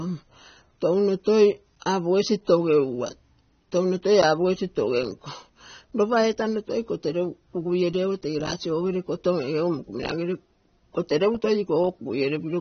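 The whole clip has that dull, smeared quality of low-bitrate AAC compression, likely AAC-LC at around 24 kbps, with a warbly texture on sibilants. At 9.08 s, right after "ogo tege lasi ogere", there's a single sharp click, likely dropped samples where just a handful went missing and the waveform jumps.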